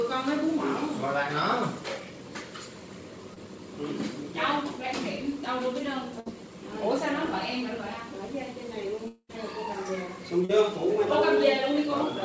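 Audio carried over a call path whose band stops at 8 kHz, consistent with G.722 at 64 kbps, shows short concealed packet loss at 3.34–3.38 s and 10.45–10.51 s, where roughly 20 ms and 40 ms were missing and the decoder extrapolated the preceding sound, leaving brief smears. A burst of packet loss at 6.20–6.28 s removes about 60 ms, bridged by a decaying continuation before the audio resumes further on. Between 9.08 and 9.31 s about 220 ms is gone, heard as a fading buzz or hiss ending in roughly 60 ms of silence, likely a long network dropout.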